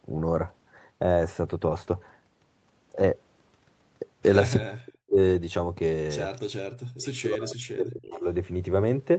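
A speech recording carried over a call, with the sound band-limited to 8 kHz, as fits a wideband Opus setting. From 4.61 to 5.2 s, the speech is suppressed in double talk. The level falls by as much as about 40 dB, for roughly half a second. The likely cause is an echo canceller that heard both sides at once, could not tell its own talker from the returning echo, and turned everything down. The same pumping returns from 6.69 to 8.27 s, over about one and a half seconds. Between these, at 6.36 to 6.41 s, a short echo leak appears. A faint copy of the speech comes back 276 ms late, about 30 dB below the direct voice. It most likely comes from a far-end loudspeaker whose echo canceller let a scrap of its microphone pickup through.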